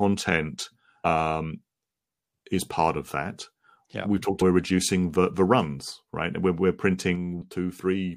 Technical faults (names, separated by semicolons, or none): damaged data in a compressed stream; sudden gain jump